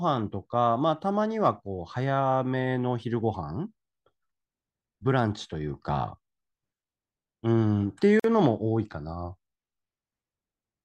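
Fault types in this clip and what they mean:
Gap at a join of encoded pieces: two separately encoded chunks butted together untrimmed, so encoder delay and end padding leave a roughly 47 ms silence in the speech at 8.20 s.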